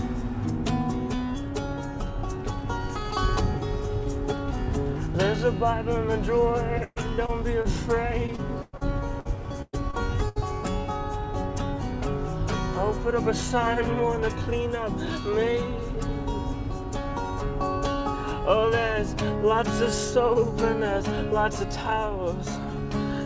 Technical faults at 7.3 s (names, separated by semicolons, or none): short concealed packet loss